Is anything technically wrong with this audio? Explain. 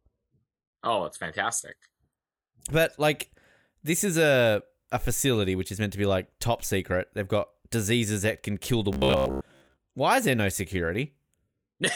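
Yes. From 8.93 to 9.77 s, right after "that can kill the", speech turns into a rigid metallic buzz near 66.7 Hz, robotic sound likely from repeating a 15 ms buffer over most of that stretch.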